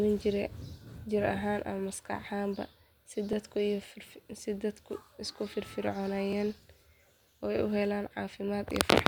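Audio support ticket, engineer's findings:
Periodic USB or driver dropouts. Regular ticks in the speech from 3.33 s to 8.31 s, one about every second. Probable component: USB audio interface or its driver, blocked at a fixed interval by a background task. Each block skips a few milliseconds of audio with no fill, so the waveform jumps and clicks. Ticks audible only while speech is present. Check USB power management, DPC latency and polling tasks.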